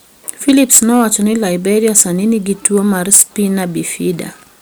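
From about 0.29 s to 1.15 s the speech shows hard clipping. The signal arrives roughly 13 dB hotter than the stage can pass, so the waveform peaks are cut flat rather than rounded. Those squared-off tops generate harmonics well above the fundamental. With overload this large the effect is not confined to occasional crackle: every louder syllable in that stretch carries a harsh, buzzy fuzz.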